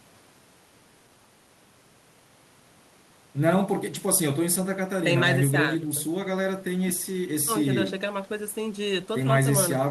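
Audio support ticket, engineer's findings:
Nothing to flag on this speech recording: listened the whole way and heard no problems, so no component to chase and no action needed.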